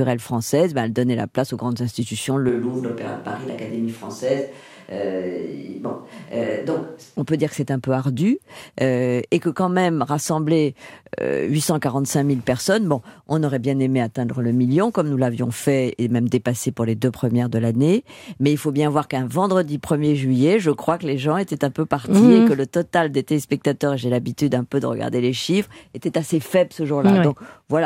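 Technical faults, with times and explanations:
2.49–7.16 s, switch to a distant microphone: after "place aux grandes institutions" the speech turns hollow and roomy, about 5 dB quieter, until "on peut dire que", likely because the close microphone dropped out. The waveform shrinks suddenly, and the spectrogram loses low end and shows smeared reverberant tails.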